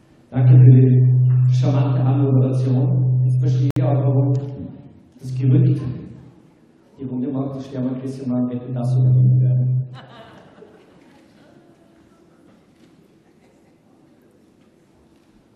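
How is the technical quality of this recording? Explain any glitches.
There's one glitch worth flagging: a gap at a join of encoded pieces, running from about 3.71 to 3.76 s. What you hear is the sound dropping out for roughly 58 ms and then picking up right where it left off. That happens when separately encoded chunks get stitched together untrimmed, so the encoder's start-up delay and the padding on the last frame both stay in. The codec softens the edges, so the truly silent stretch is a bit shorter than the full gap.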